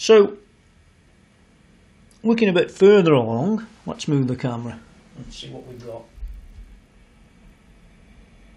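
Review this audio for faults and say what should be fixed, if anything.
From 5.58 to 8.14 s there is a 50 Hz buzz, present only while there is signal, caused by a resampler restarted on every block. Each 20 ms block was converted from 24 kHz to 48 kHz in isolation, so every block edge gets a small error. On a spectrogram this appears as thin vertical lines every 20 ms; the waveform shows small steps at the same spacing. To prevent it, keep the resampler's filter state running across blocks.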